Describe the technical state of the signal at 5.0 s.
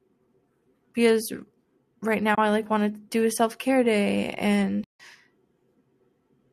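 At 5.0 s the sound is inside a dropout from AAC frame loss with muting. It runs from 4.84 to 5.00 s, about 160 ms. The decoder zeroed the spectrum of the missing frames. Overlapping windows fade the audio out and back in, leaving a soft-edged hole.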